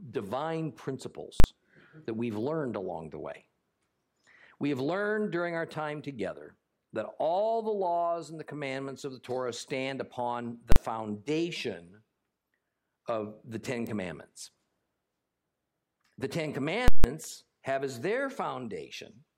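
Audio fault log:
1.40–1.44 s and 10.72–10.76 s: invalid numbers at full scale. A calculation blew up to infinite or invalid values. Each 40 ms block was pinned at the largest possible sample value. The jump to the rail and back comes so close together that each is heard as a single loud bang.
13.87 s: electrical switching spike. A sharp snap sits on top of the sound without interrupting it. This is likely an arc from a nearby switch, motor or static discharge coupling into the audio line.
16.88–17.04 s: invalid numbers at full scale. The same failure holds for a longer 160 ms block. The output jumps to full scale, stays flat, then drops back. That gives a loud pop at each edge with no sound between, because a constant level carries nothing audible.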